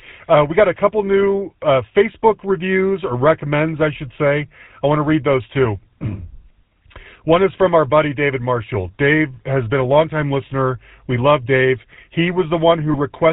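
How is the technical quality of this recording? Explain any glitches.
The speech has a buzzy, gravelly roughness throughout with nothing above 4 kHz, typical of the GSM full-rate codec. It models the vocal tract, excited by sparse regular pulses, which fits a 13 kbps full-rate link.

From 12.92 to 12.95 s, a brief rough, metallic ring holds the sound. These are lost GSM frames, matching a single dropped 20 ms frame. The decoder repeats the last good frame's settings.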